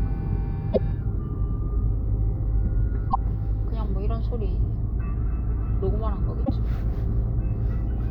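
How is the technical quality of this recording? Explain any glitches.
The recording has three short glitches, all from damaged data in a compressed stream, at 0.69–0.78 s, 3.07–3.16 s and 6.42–6.50 s, each lasting about 80 ms. At each point, corrupted bytes in the encoded file make the decoder misread or reject frames, lose sync, and hunt for the next valid frame header. The result is a brief chirp or blip that interrupts the sound before playback recovers.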